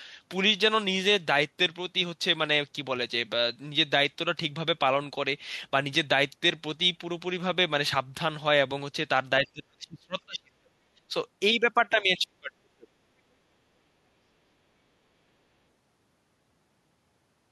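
A speech recording with two spells of speech suppressed in double talk. From 9.41 to 11.12 s the speech sinks in patches by up to about 30 dB. From 12.01 to 12.96 s it drops by up to about 35 dB. An echo canceller likely turned it down while the far side talked.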